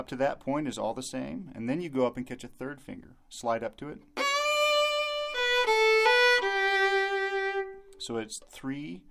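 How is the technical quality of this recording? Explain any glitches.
No glitches can be heard anywhere in the recording, and the signal stays continuous and stable throughout.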